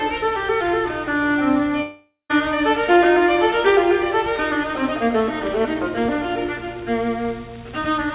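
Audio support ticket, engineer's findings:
1.82–2.31 s: sound smears into a fading buzz, then near-silence, resuming with about half a second missing. Likely a long network dropout with concealment fill. Spectrogram shows a blurred, decaying band, then an empty gap, all below 4 kHz (G.711 band limit).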